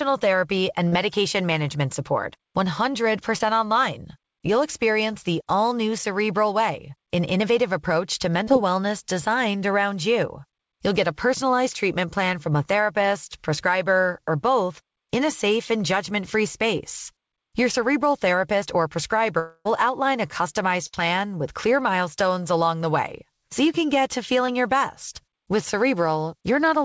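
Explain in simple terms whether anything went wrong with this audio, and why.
Several short breaks in the call can be heard.

The first kind is short concealed packet loss. It happens at 0.88, 3.38, 8.44 and 24.47 seconds. Each time, between 20 and 40 ms of audio arrived too late. The receiver filled the hole by stretching the sound just before it. You hear a quick smear or wobble.

At 19.39 s there is a longer break, lasting until 19.67 s. The last sound carries on as a fading buzz or hiss, followed by a short silence. About 260 ms of speech is lost. This is likely a long network dropout.

Soon after, at 20.87 s, comes a burst of packet loss. About 60 ms never arrived. The last sound is held briefly and dies away. The speech then resumes slightly further on, with that piece missing.

The call itself went through a G.722 codec. It keeps nothing above 8 kHz.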